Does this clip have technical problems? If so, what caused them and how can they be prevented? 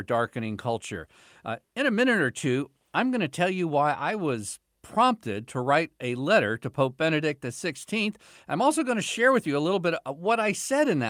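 No, no technical faults here.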